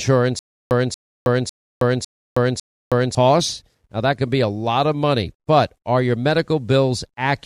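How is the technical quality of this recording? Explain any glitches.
The recording has one clear glitch: a stutter with silent gaps from 0.39 s to 3.15 s. A 233 ms fragment of speech plays, drops to dead digital silence for 319 ms, then returns identically, five times on a steady 552 ms cycle. The likely cause is a stalled stream replaying its last buffered chunk at each retry before running dry. On a waveform and spectrogram it shows as identical blocks separated by flat, empty gaps, and the speech meant for that span is gone.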